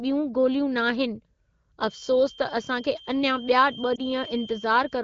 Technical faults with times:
1.79-5.04 feedback whistle
3.95-4.01 lost AMR speech frames

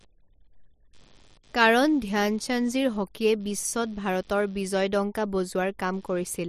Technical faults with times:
0.00-6.49 computer activity noise

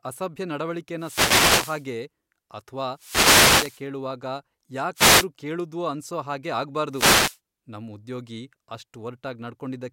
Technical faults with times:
0.97-1.87 wireless microphone noise hit
2.94-3.85 wireless microphone noise hit
4.95-5.27 wireless microphone noise hit
6.91-7.38 wireless microphone noise hit

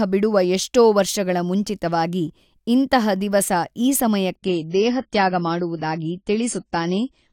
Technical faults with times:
4.35-7.33 adaptive stream at a lower bitrate

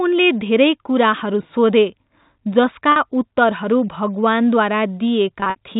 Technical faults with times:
2.92-2.96 packet loss with pitch repetition
5.40-5.56 packet loss with pitch repetition

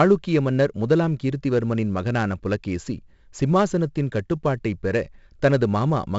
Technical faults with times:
0.00-6.18 4-bit ADPCM compression

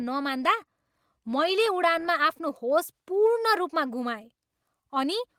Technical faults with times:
none

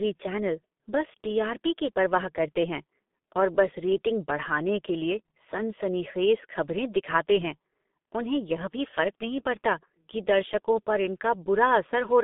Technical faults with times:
0.00-12.24 G.723.1 codec

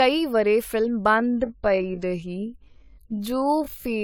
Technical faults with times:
0.00-4.03 generation loss
1.04-4.03 time-stretched section

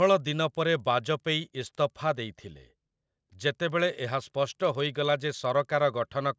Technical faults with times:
0.00-6.38 resampler restarted on every block

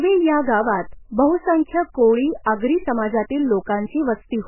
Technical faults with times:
0.00-4.47 MP3 compression

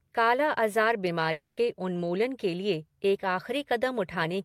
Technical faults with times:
1.31-1.59 long network dropout

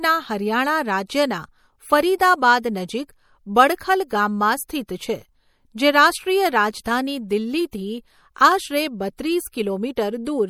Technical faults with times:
0.00-10.50 MP3 compression

